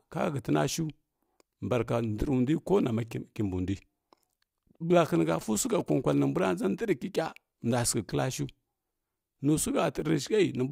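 Speech, with a burst of GSM signalling bursts from about 5.33 to 6.14 s, just before "nimbua nʒə". It's that galloping dit-dit-dit of short 217 Hz buzzes, sitting fairly quietly under the speech, from a nearby 2G phone's radio pulses being rectified by the audio circuit.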